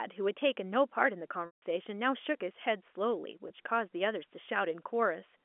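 Speech over a G.711 A-law telephone line, band-limited to roughly 250 Hz to 3.4 kHz, with two gaps from packet loss with pitch repetition. At 1.46 s, 160 ms is lost: the last pitch period loops briefly, fades over about 50 ms to silence, then the speech cross-fades back at 1.62 s. At 3.48 s, a 20 ms loss, consistent with a single packet, is just a brief buzzy hold. A plain dropout would cut straight to silence without that repeated tone.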